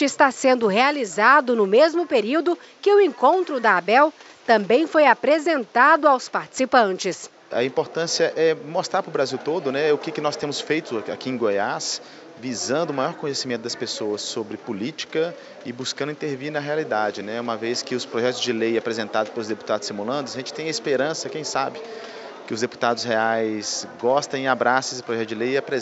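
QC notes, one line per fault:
No faults found, so there is no fault to list.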